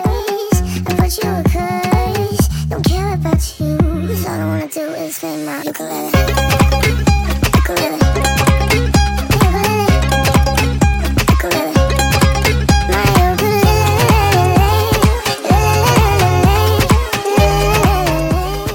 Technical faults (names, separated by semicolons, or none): wrong sample rate